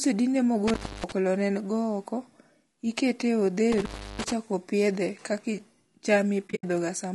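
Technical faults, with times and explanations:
Throughout: low-delay AAC compression, likely AAC-ELD at around 32 kbps; short frames resolve harmonics poorly, leaving the speech rough and grainy with noise between harmonics.
0.68–1.12 s: intermittent contact; the line opens for about 277 ms, cutting the speech out with crackle at both edges and faint hiss during the gap.
3.72–4.32 s: intermittent contact; a second break opens the line for about 331 ms, again with crackling edges where the connection drops and returns.
6.47–6.64 s: AAC frame loss with muting; about 120 ms of zeroed spectrum scattered over 160 ms, longest hole near 70 ms, with overlapping windows giving soft fades.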